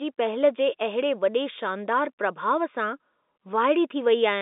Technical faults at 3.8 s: none

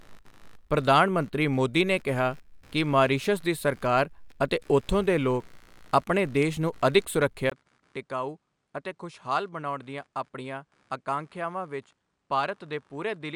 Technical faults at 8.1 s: computer activity noise; input switched to a poorer device

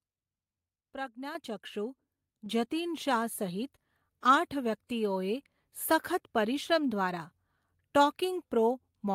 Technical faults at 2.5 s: microphone volume stepped up

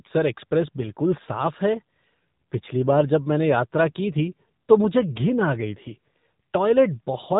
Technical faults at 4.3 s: AMR narrowband mobile codec

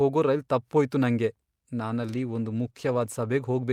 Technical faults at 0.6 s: none

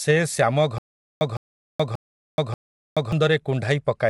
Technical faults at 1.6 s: low-delay AAC compression; stutter with silent gaps

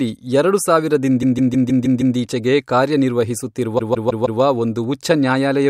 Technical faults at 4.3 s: repeated frames

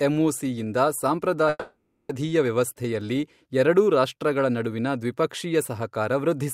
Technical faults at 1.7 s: long network dropout

